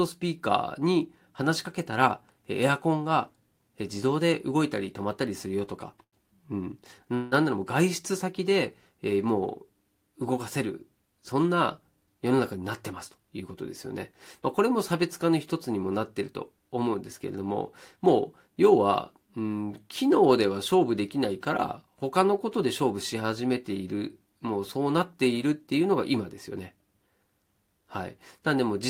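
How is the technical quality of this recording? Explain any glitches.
The speech carries several network timing glitches: a stall, a freeze and four speed-ups.

A short stall from a late packet occurs at 6.03 to 6.16 s. The jitter buffer ran dry, so the last sound was held about 93 ms, with nothing lost.

A call audio freeze at 7.15 to 7.35 s stretches the sound into a fading buzz for 171 ms, likely from delayed packets emptying the buffer.

Jitter buffer speed-ups occur at 11.91 to 13.51 s, 17.96 to 18.57 s, 22.57 to 23.15 s and 25.80 to 26.82 s. The receiver trimmed pitch periods to shed backlog, so the speech runs 4 to 9% faster at the same pitch, and the speed-ups at 105% or more sound hurried.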